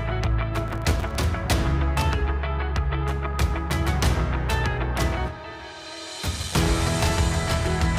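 Processor overload crackle runs from 0.68 to 1.15 s: the processor could not finish its short audio buffers on time, missing roughly thirty deadlines over that stretch. Each buffer lasts only a few milliseconds, and every miss drops in a sliver of silence with hard edges. Packed this closely, those gaps merge into a gritty, tearing crackle riding on the sound for about half a second, which clears once the load eases.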